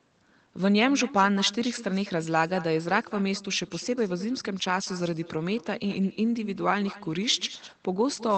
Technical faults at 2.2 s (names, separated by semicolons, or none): echo with no canceller